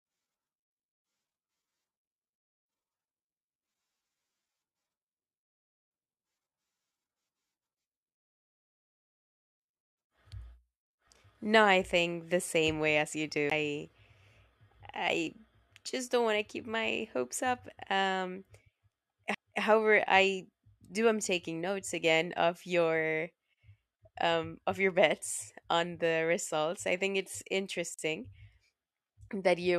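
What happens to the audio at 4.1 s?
Nothing goes wrong at 4.1 s: the speech carries straight through that moment with no audible fault.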